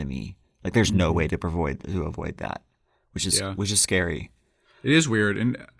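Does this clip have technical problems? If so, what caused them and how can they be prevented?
No, nothing in this speech clip stands out as a technical problem, so there's nothing here that needs preventing.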